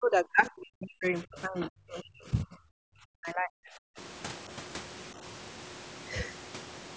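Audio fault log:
0.00–2.86 s and 3.05–3.98 s: speech suppressed in double talk. The speech dips and cuts out in pieces, by up to about 40 dB. Roughly two seconds are hit in the first stretch, one in the second. An echo canceller likely mistook overlapping talk for echo and muted it.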